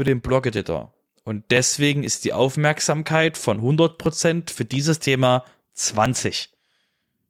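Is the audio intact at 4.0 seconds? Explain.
No. Periodic USB or driver dropouts run from 0.08 s to 7.05 s, covering 4.0 s: something blocks the audio path every 0.498 s and about 2 ms of speech is skipped each time, giving evenly spaced ticks wherever there is speech.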